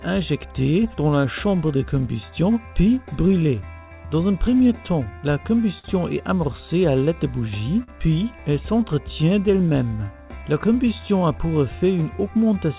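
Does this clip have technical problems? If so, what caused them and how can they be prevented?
Yes. Clock drift between sender and receiver: the sender's clock runs about 4% slow, so the jitter buffer keeps draining and the receiver must keep padding the audio. On a waveform this shows as slightly stretched spacing. Prevent it with receiver-side adaptive resampling that tracks the sender's actual clock rate.

Repeated timing corrections run from 0.47 to 5.33 s at 96% speed and from 7.15 to 12.74 s at 97%. They add roughly a fifth and then a seventh of a second through small repeated slices. On a spectrogram they appear as faint duplicated frames. Prevent them by using smooth time-stretching rather than discrete repeats.

A short stall from a late packet occurs twice, from 5.79 to 5.86 s (51 ms) and from 7.83 to 7.90 s (49 ms). Each time the last sound is held, nothing is lost, and a steady horizontal smear appears on the spectrogram. 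Prevent it with a slightly deeper jitter buffer or better network prioritisation.

The call path's G.711 A-law coding at 64 kbps leaves nothing above 4 kHz, visible as an empty band on the spectrogram.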